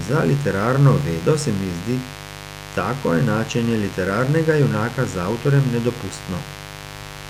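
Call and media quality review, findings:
Mains buzz throughout the speech: steady raspy 50 Hz buzz, roughly 15 dB below the speech. Switching spikes twice per mains cycle from a dimmer, rectifier or unshielded cable put harmonics up into the kHz range.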